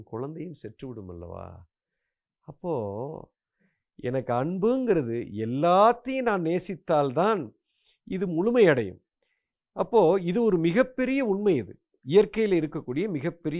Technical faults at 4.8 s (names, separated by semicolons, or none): none